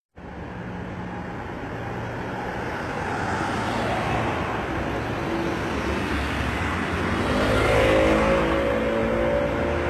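Throughout, the treble sounds gritty and metallic, stopping entirely above about 12.3 kHz, likely from HE-AAC compression rebuilding highs at a very low bitrate, around 16 kbps.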